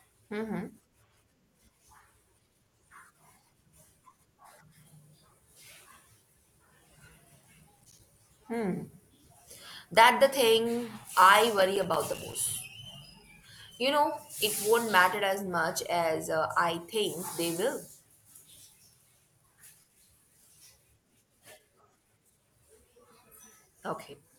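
At 7.78 to 8.00 s, and again from 11.59 to 12.35 s just after "the thing I", the speech breaks into processor overload crackle: the system misses a run of deadlines for its short audio buffers, roughly 5 ms each, and each miss leaves a hard-edged silent gap. About ten and then fifteen tiny dropouts in quick succession create a gritty, torn texture, which sets this apart from a single clean dropout or from clipping on loud peaks.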